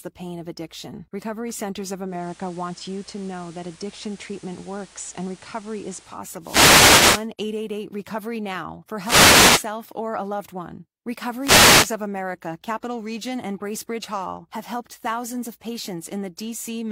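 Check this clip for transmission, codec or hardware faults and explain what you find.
Two kinds of fault are present in this speech.

From 2.06 s to 6.25 s, digital radio blending to analogue: the receiver cross-fades over about 0.24 s to FM, adding hiss about 30 dB down, at unchanged level.

Wireless microphone noise hits occur at 6.39–7.28 s, 8.98–9.67 s and 11.39–11.94 s: RF fades let receiver noise rise, heard as brief swishes of static.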